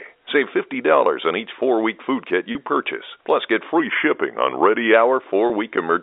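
Packet loss with pitch repetition occurs at 2.52 to 2.55 s, just after "four week food kit", and again at 5.47 to 5.50 s. Each gap lasts 30 ms, which fits a single lost packet. The receiver filled each hole by repeating the last pitch period of the speech, so both spots sound like a brief, slightly held buzz before the speech carries on. The speech comes through a G.711 A-law telephone line.

A drift correction step runs from 3.80 to 4.94 s. The speech suddenly slows by 5.85% and drops 104 cents, roughly a semitone, with speed and pitch falling together. It then snaps back to normal at 4.94 s. The likely cause is clock-matching software changing the playback rate in one jump to manage its buffer level.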